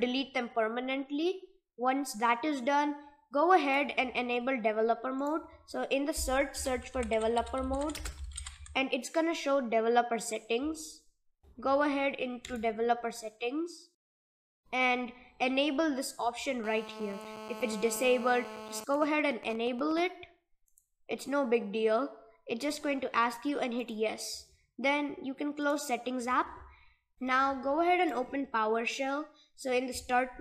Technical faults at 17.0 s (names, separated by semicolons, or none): GSM phone buzz